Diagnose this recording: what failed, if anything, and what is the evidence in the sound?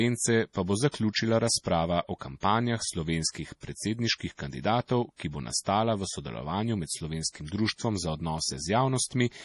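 The fault sits at the codec stage, and MP3 compression is the likely cause. The speech has nothing above 11.5 kHz, a hard shelf where the encoder dropped the treble. The damage is heavy and runs the whole clip. Weak frequency lines switch on and off between frames, so the sound turns watery and swirly. That degree of starvation fits a low bitrate near 32 kbps.

Pre-echo comes from the same block-based coding. A short hiss runs ahead of sharp onsets at 0.91, 2.40, 3.60, 5.16 and 7.46 s. Each smear lasts 24 to 34 ms. The encoder spread quantisation noise across a whole block. Where an attack fell late in the block, noise sized for the loud part leaked into the quiet gap before it. The onsets sound soft and blurred.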